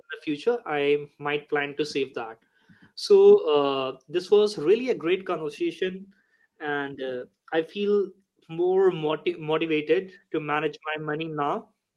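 No technical faults are audible.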